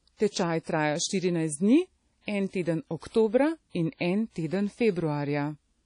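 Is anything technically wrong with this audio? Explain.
Yes. Throughout the speech there is plainly audible WMA compression damage, likely from encoding with a simple Windows Media Audio transform codec at a rate that fits around 32 kbps. Long transform blocks smear quantisation noise over tens of milliseconds, so the speech rings and the hiss swells and fades with it. Quiet spectral detail is zeroed out. On a spectrogram, nothing appears above 10.1 kHz, a sharp shelf, with speckled gaps and blurred, smeared onsets below it.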